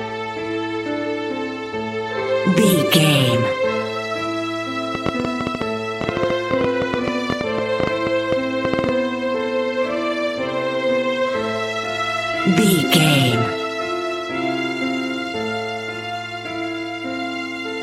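From 4.95 s to 8.90 s a train of clicks ticks and pops over the sound, audible in the quieter gaps as well, at close to nine clicks per second but with uneven spacing, some forty in all. The clicks share much the same sharp shape and stand well above the surrounding audio, roughly 15 dB louder at their peaks. Such a burst of repeated pulses is likely interference from nearby equipment or a faulty connection or power supply.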